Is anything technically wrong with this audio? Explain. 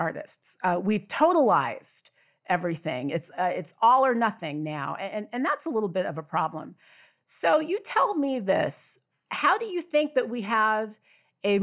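No, nothing technically wrong can be heard in this speech recording; the signal holds steady throughout without any audible defect.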